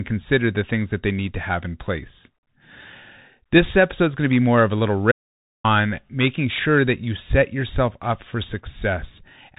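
From the first second, the speech has passed through a Bluetooth CVSD headset codec, plainly audible and consistent with the 64 kbps narrowband headset link. CVSD encodes each sample as a single up-or-down bit with an adapting step, so content above 4 kHz is gone and the speech sounds boxed-in and telephone-like. Where the signal moves faster than the step can follow, it distorts: s sounds turn scratchy, and a granular hiss sits under the speech throughout.

At 5.12 s the sound drops out to silence until 5.64 s, losing about 0.53 s. The input was likely lost for that stretch, through a broken link, a disconnect or a momentary mute, while recording carried on writing silence. The speech stops abruptly mid-flow and resumes just as abruptly, and the gap is dead digital silence with no room tone, so whatever was said during it is simply missing.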